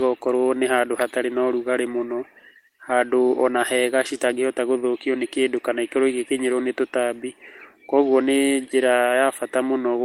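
No technical faults can be heard in the recording.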